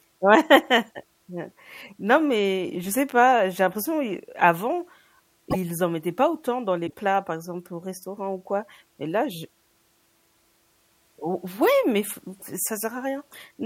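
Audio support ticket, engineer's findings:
Speech skips forward with a brief garbled disruption at 5.50–5.56 s and 6.86–6.94 s, each spanning two to three 26.1 ms frames. Likely broken MP3 bit reservoir: after a cut, the next frames reach back for borrowed data and decode another frame's bytes.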